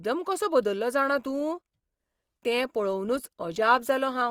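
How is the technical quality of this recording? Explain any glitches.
The quality drops partway through. From 1.02 s to the end, the adaptive stream switches to a lower bitrate: the speech suddenly picks up more codec artefacts, consistent with Opus falling from 64 to 24 kbit/s. The waveform has no gap, but on a spectrogram the change shows abruptly at that instant.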